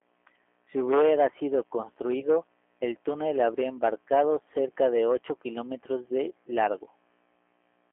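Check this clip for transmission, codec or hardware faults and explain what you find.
Two faults stand out: a low-rate speech codec across the whole clip and one short dropout concealed by that codec.

G.729 codec, throughout: The speech is squeezed into a telephone band of roughly 300 Hz to 3.4 kHz and rebuilt from a vocal tract filter plus sparse pulses, which fits 8 kbit/s G.729A. It sounds plainly rough and a bit synthetic.

VoIP packet loss concealed by the speech codec, from 2.20 to 2.26 s: Right after "hubiera sido", a gap that fits one lost 20 ms packet gets patched by extrapolating the last pitch and filter. You hear a brief stretched, fading sound, and the voice stays weak or distorted into "el túnel habría embarcado".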